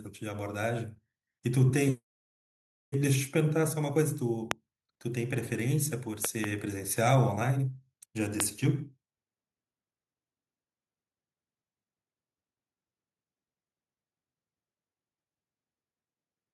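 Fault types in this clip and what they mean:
Automatic gain rising: From 0.2 to 0.99 s, the speech and the background noise behind it swell together, ending about 4 dB louder. Both rise as one, so the talker is not simply speaking up. The level control in the recording chain judged the opening input too quiet and turned its gain up smoothly over that span, lifting everything it was receiving.
Loud pop: Sharp pops sit on top of the speech, which carries on underneath without a break. There is a single pop at 4.51 to 4.53 s, a quick double pop between 6.25 and 6.46 s, and another single pop at 8.40 to 8.42 s. Each jumps far above the speech, roughly 15 to 25 dB. The likely cause is brief voltage spikes, as from a loose plug, a switch, static or a driver glitch.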